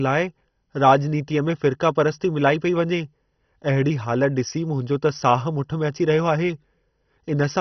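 From start to finish the speech sounds dull and gurgling, with nothing above about 6.1 kHz and a coarse, granular grit under every syllable. This is heavy damage, likely from MP2 compression at a starved bitrate, which fits about 32 kbps: upper sub-bands are switched off entirely and the surviving bands flicker and are crudely quantised. A plain low-pass filter would dull the sound cleanly, without this bubbling, band-by-band instability.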